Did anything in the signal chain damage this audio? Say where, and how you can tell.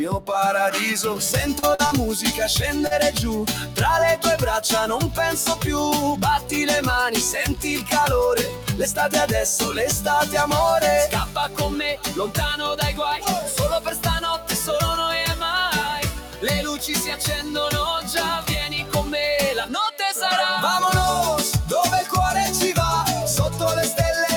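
Yes. In call processing, a noise suppressor built for speech was left on, treating held tones, ambience and reverb as noise. Throughout the clip, level swings by roughly 5 dB: attacks pass, but sustained parts and tails sink, so the sound pumps and thins.

On the network path, packets arrived too late for the decoder, causing short concealed packet loss at 1.59, 1.75, 1.87 and 2.87 s. Each gap of about 40 ms was filled by extending the preceding sound, heard as a brief smear or wobble.

The same suppressor also produced sound cut by the noise suppressor, pushing specific passages down harder: 3.51 to 3.78 s (about 7 dB), 8.49 to 8.69 s (about 7 dB), 11.26 to 11.6 s (about 8 dB) and 16.11 to 16.43 s (about 9 dB), where sustained or decaying sound drops away.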